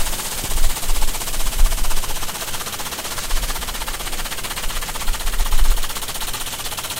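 From start to finish, a steady 50 Hz buzz sits under the sound. This is a block size mismatch, truncated type. One stage hands over longer blocks than the next stage takes in. The tail of every block is dropped. Each cut leaves a jump, and those jumps repeat 50 times a second. The pattern fits blocks of 1024 samples being written. The audio also runs 1.07 times too fast, yet its timbre stays.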